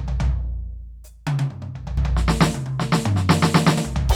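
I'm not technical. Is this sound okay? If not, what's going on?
No. The recording was most likely handled in two-second chunks, with roughly a fifth of a second lost each time one chunk closed and the next began. That is audio missing between chunks, heard as sudden jumps forward in the music at 1.97 s and 3.77 s.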